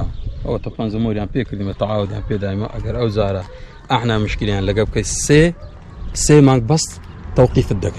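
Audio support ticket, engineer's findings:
No technical faults found on listening; the signal path shows nothing to flag for follow-up.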